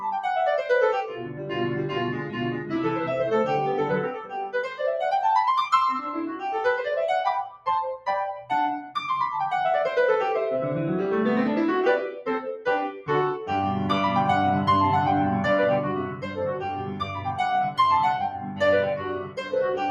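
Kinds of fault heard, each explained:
noise suppressor applied to music or sounds: The music pumps and thins, with held parts and tails sinking while attacks stay up, and the level swings by about 10 dB. A noise suppressor built for speech was left on, treating sustained musical sound and ambience as noise.
sound cut by the noise suppressor: The sound dips at 1.04–1.58, 2.13–2.73, 4.05–4.81, 7.46–7.67, 12.92–13.09, 16.1–17.33, 18.3–18.61 and 18.96–19.53 s, by up to about 15 dB at 7.46 s. The suppressor mistook these stretches for noise and turned them down more than the rest.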